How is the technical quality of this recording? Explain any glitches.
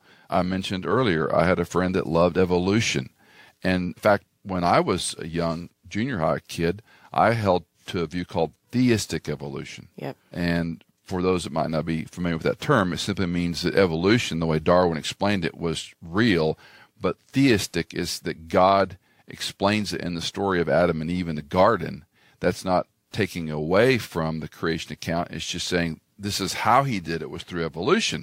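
No technical faults are audible.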